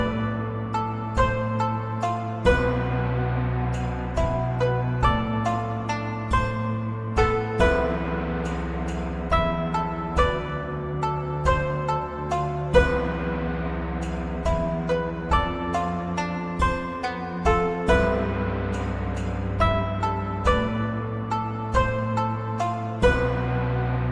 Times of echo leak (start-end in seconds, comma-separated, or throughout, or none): none